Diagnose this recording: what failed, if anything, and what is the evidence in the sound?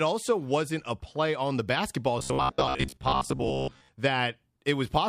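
From 2.19 to 3.89 s, robotic sound from repeated short buffers: a rigid 66.7 Hz buzz, likely a buffer stage repeating 15 ms chunks. Codec warble would not hold one fixed pitch.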